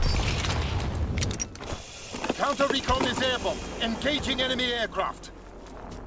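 No technical fault is audible; the audio arrives over a call path whose content stops at 8 kHz, which fits a G.722 wideband link.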